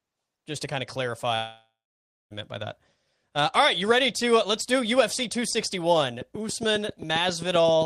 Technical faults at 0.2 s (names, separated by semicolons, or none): none